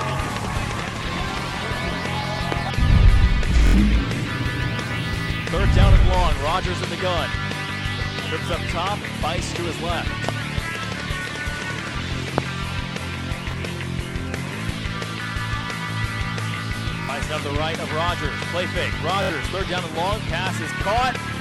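A loud pop sits at 2.52 to 2.54 s, rising about 15 dB above the surrounding level as a single sharp pulse that lasts roughly 20 ms while the sound carries on underneath. The likely cause is a brief voltage step or spike, from a switch, connector, static discharge or driver glitch, entering the chain and being shaped by the circuitry that follows.

At 3.67 to 3.74 s a repeated buffer appears: one block of about 23 ms, which fits a 1024-sample buffer, plays three extra times with a hard join at each repeat. Fresh audio failed to arrive in time, so the device replayed the last block, and roughly 70 ms of material is lost. It is heard as a short stutter.

The same single pop recurs at 10.29 to 10.31 s at about 15 dB, then at 12.38 to 12.40 s at about 20 dB, the sharpest of the three.

Further buffer repeats follow. At 13.51 to 13.54 s a single extra play drops about 20 ms. At 17.04 to 17.09 s two extra plays lose about 50 ms, and at 19.23 to 19.30 s three extra plays lose about 70 ms, each heard as a short stutter.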